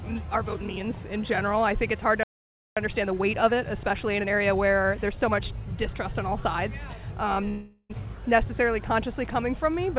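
The audio comes through a call path whose band limit, with nothing above 4 kHz, fits G.711 mu-law coding at 64 kbps. At 2.23 s a playback stall, likely from the player running out of buffered data or its output thread being blocked, cuts the output to silence in mid-flow. The gap lasts about 0.53 s, until 2.77 s, and the sound then resumes. Because the stall left a backlog, the player performs a time-compressed catch-up from 2.77 to 5.77 s. It trims the delay by removing small slices and cross-fading across the joins, so for those three seconds the audio runs at 1.15 times normal speed. The pitch stays where it was, but the passage sounds hurried. At 7.48 s a long network dropout starts. This is a stretch in which packets likely never reached the receiver. The receiver fills the hole by extending the last sound as a buzzy, hissing continuation that fades over about 0.41 s. Roughly 40 ms of silence follows, and at 7.91 s the audio returns further along, with about 0.42 s of the original never played.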